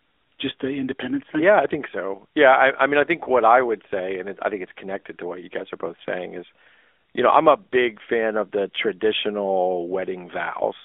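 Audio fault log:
throughout AMR narrowband mobile codec: The speech was squeezed through a narrowband vocal-tract model, so the line band runs only from 250 Hz to 3.5 kHz and plainly audible buzzy, synthetic coloration remains, which fits a higher-rate mode around 10.2 kbps.
3.24–3.29 s lost AMR speech frames: Between "I mean I think" and "I would say and", a speech frame failed its checksum and the decoder repeated the previous pitch and vocal-tract settings at reduced gain, which points to one missing 20 ms frame and gives a short dip or warble.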